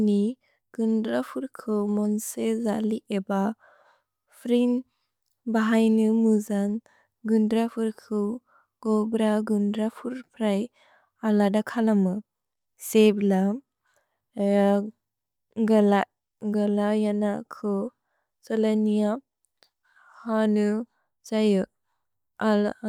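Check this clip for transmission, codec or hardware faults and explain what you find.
Nothing wrong turns up anywhere in this recording.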